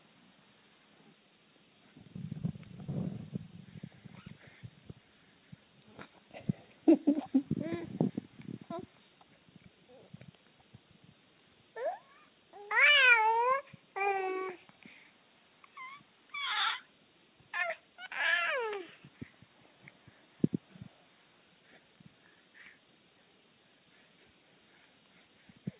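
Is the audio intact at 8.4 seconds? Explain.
No. From 8.23 to 10.03 s the jitter buffer speed-up is running: the receiver had built up excess buffered audio and trimmed it away in pitch-period slices, roughly a fifth of a second in total, so the sound plays about 12% faster at unchanged pitch and comes across a bit rushed.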